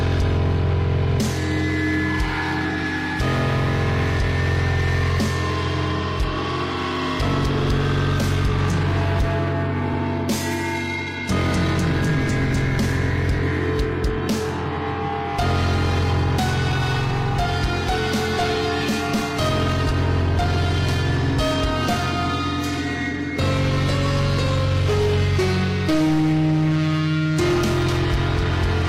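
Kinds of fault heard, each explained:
Repeated frames: at 9.9 s and 14.73 s, a 92.9 ms block, fitting two compressed frames, replays once, causing a brief stutter and adding 92.9 ms each time.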